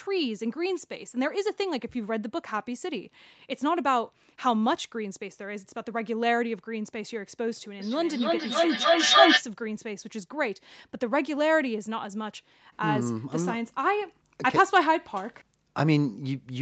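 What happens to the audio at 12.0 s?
At 12.0 s the speech runs on intact, with no dropout, glitch or other fault.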